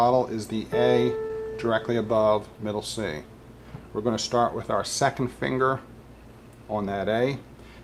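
At 1.27 to 1.31 s there is a short concealed packet loss: about 20 ms of audio arrived too late for the decoder, and the receiver synthesised roughly 18 ms to cover it by extending the preceding sound, either from its pitch or as shaped noise, before cross-fading back. It comes across as a brief smear. On a spectrogram the gap shows as a stretch of repeated, blurred spectral content without fresh onsets.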